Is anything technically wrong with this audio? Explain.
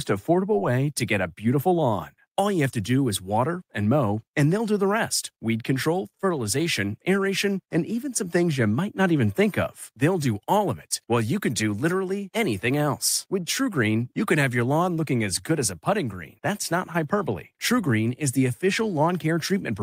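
Yes. At 0.51 to 0.53 s, a short concealed packet loss: about 10 ms arrived too late, so the decoder extrapolated 10 ms, leaving a brief smear in the speech.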